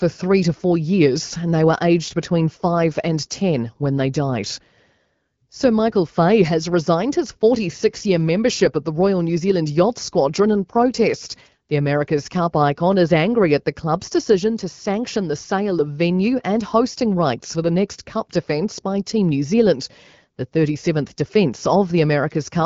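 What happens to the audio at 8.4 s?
Nothing goes wrong at 8.4 s: the speech continues intact through that moment, carried cleanly by the AMR wideband (HD Voice) codec.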